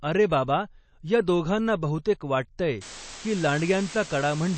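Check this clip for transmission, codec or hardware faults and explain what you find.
Two faults are present in this speech.

Throughout, the audio is watery and swirly, with nothing above 8.3 kHz; this is likely MP3 compression, fitting a bitrate near 32 kbps, and the spectrogram shows a flat ceiling and flickering gaps.

From 2.81 s to the end, low bit depth with dither adds steady hiss, since 5-bit rounding becomes white noise around 15 dB below the signal, filling the spectrogram evenly.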